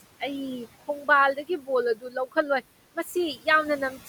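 Noise suppressor artifacts run through the whole speech clip. The suppressor judges, frame by frame, which frequency bands hold steady noise, and pulls those bands down by about 17 dB. The room noise sits about 18 dB under the speech. It drops away in the gaps between words and comes back underneath them.

Speech cut by the noise suppressor occurs twice. The first is from 1.36 to 1.69 s. The second is from 1.95 to 2.16 s. In each, the suppressor mistook quiet parts of the speech for noise and turned them down with the background. The deepest drop is about 12 dB in the first and about 14 dB in the second. Only a brief stretch is hit each time, around a tenth of a second or a little more. Those sounds come across swallowed and faint.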